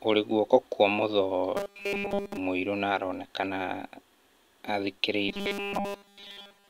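From 1.57 to 2.37 s, just before "mũirũ na aronekana", and again from 5.29 s to the end at 6.69 s, the speech turns into a rigid metallic buzz at 200 Hz. This robotic sound from repeated short buffers likely comes from a 5 ms chunk being replayed while new audio is late. The first stretch is entirely repeats and the second mostly so. On a spectrogram it shows as flat harmonics every 200 Hz, and the waveform shows an identical short cycle over and over.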